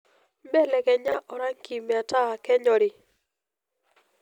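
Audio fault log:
1.08–1.14 s, chunks out of order: in this stretch of speech, one 20 ms chunk plays two chunks late, after the pair that should follow it. The result is a brief jumbled scramble framed by three hard joins. Unlike a dropout, no sound goes missing and the clip keeps its timing. Unlike a stutter or repeat, nothing plays twice. The same material simply arrives in the wrong sequence.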